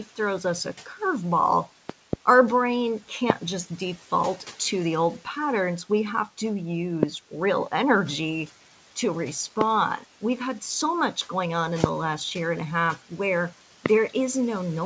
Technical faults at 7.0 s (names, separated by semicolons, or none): noise suppressor artifacts; loud pop